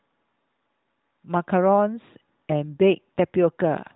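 Nothing's gone wrong in this bit of speech: it comes through a narrowband mobile codec, AMR-NB by the sound of it, with nothing above 3.8 kHz, and nothing stands out as a fault anywhere along the way.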